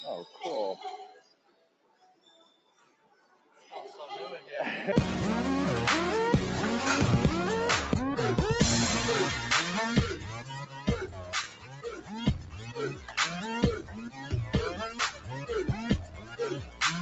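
Across the whole clip, a noise suppressor applied to music or sounds is active. Built for speech, it treats steady tones, ambience and decaying tails as noise, so its gain moves by roughly 15 dB as the material changes. Attacks come through while sustained parts sink, giving a pumping, thinning character. The top end stops near 8 kHz, consistent with a wideband Opus call path.

The sound is cut by the noise suppressor in eight places. The longest runs from 1.12 to 3.72 s, dropping by about 14 dB at its deepest. After that the cuts come in shorter bursts: 10.4 to 10.88 s (about 11 dB), 11.05 to 12.15 s (about 13 dB), 12.43 to 13.18 s (about 10 dB), 13.8 to 14.32 s (about 11 dB), 14.91 to 15.5 s (about 9 dB), 16.05 to 16.4 s (about 11 dB) and 16.63 to 16.81 s (about 9 dB). In each, the held portion sags or its decay is clipped short.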